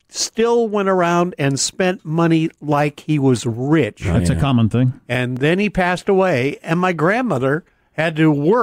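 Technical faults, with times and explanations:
1.36–7.37 s, clock drift buffer slips: starting just after "still went around", a click recurs every 2.0 s, about four in all, each heard over the speech as a brief tick. The likely cause is two devices running on separate clocks a few hundred ppm apart, so a buffer between them creeps until a few dozen samples are dropped or repeated. The strict 2.0 s spacing separates this from packet-loss dropouts, which fall irregularly and leave audible gaps.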